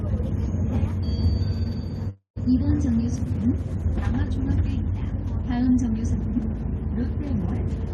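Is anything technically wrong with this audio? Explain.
Yes. From 2.09 to 2.38 s there is a call audio freeze. The sound stalls for about 0.27 s and then resumes exactly where it left off. The likely cause is delayed packets draining the jitter buffer, so the receiver stretched the last audio into a fading buzz that falls to near-silence for about 130 ms. On a spectrogram this shows as a smeared, decaying band and then a dark gap. The waveform tapers and flattens before the sound picks up again. Nothing is lost, but everything after the freeze plays about 266 ms later. Above roughly 12 kHz the spectrogram stays empty, as expected from the Opus call codec.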